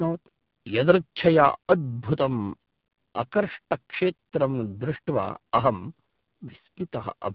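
From start to finish the speech carries heavy AMR narrowband mobile codec damage. Nothing passes above 3.8 kHz, and the voice sounds buzzy and synthetic, as the vocal-tract model is fed too few pulses per frame, which fits a low mode near 5.9 kbps.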